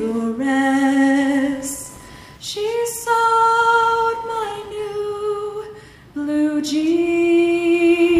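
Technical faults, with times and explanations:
Throughout, computer activity noise: a faint buzz pulsing around 1 kHz, roughly 30 dB below the sound, as computer load changes disturb the shared audio ground.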